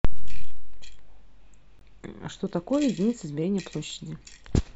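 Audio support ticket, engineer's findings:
Gap at a join of encoded pieces, 1.79 s: 19.8 ms gap in speech, edges smeared. Untrimmed encoder delay and frame padding. Speech resumes where it stopped, so nothing is lost, unlike a dropout.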